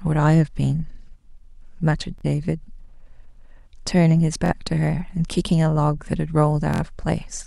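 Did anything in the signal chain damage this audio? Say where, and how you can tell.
Yes, at the wireless playback link. There is Bluetooth stutter at 2.18 to 2.24 s, 4.46 to 4.53 s and 6.74 to 6.82 s. Each time, a short slice of the speech repeats as a brief buzz, and the sound then resumes further along. About 46 ms, 46 ms and 70 ms go missing, which fits two, two and three lost packets. The receiver replays its last buffer until fresh data arrives. Unlike a plain dropout, the gap is filled with repeats instead of silence.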